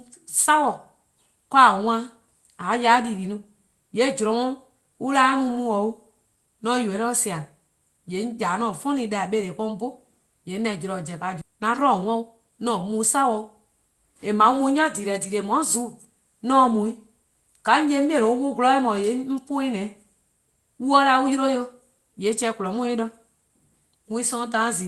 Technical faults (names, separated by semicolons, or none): skip ahead; jitter buffer speed-up